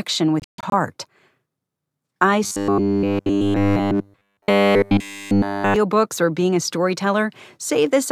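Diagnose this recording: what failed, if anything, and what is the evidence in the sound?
Bluetooth dropout, 0.40 to 0.73 s, in the wireless playback link. The speech breaks into several silent holes, about 0.21 s lost in total across roughly 0.33 s, the longest gap about 0.14 s. When the sound returns it has moved on, as if it had kept playing through the gaps. The likely cause is audio packets reaching the headphones too late and being discarded, so the output stays silent until usable packets arrive.

Robotic sound from repeated short buffers, 2.44 to 5.76 s, at the driver or buffer stage. Across this whole stretch the speech becomes a rigid, metallic buzz at 100 Hz that only loosely tracks the original syllables. A fixed 100 Hz tone fits a 10 ms block being replayed over and over. The likely cause is fresh audio arriving too rarely, so playback keeps looping the last block while the real material in between is skipped.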